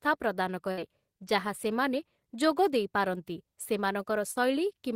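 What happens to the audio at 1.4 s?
Nothing goes wrong at 1.4 s; the speech runs through that moment intact, with no dropout, click, distortion or other audible fault.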